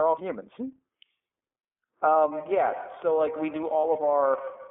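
The whole recording passed through the iLBC codec, whose coarse excitation coding in 30 ms frames fits its 13.33 kbps mode. The line band is held to about 250 Hz to 3.5 kHz, so the speech is muffled, slightly rough and plainly synthetic throughout.

At 2.13 to 2.16 s a packet went missing, causing lost iLBC frames. The decoder covered the 30 ms gap by repeating the last pitch cycle with added noise, giving a brief buzzy held-vowel smear before clean decoding resumes almost immediately.

From 2.32 s to the end, a feedback echo between two devices sets in. A second device in the room replays the call and that microphone resends it, so the speech returns at roughly 150 ms intervals, peaking at about 11 dB below the direct speech and sounding thin and ringing.

At 3.81 to 3.85 s a second lost iLBC frame, again 30 ms, produces the same short buzzy fill, heard through the ongoing echo, before the codec recovers at once.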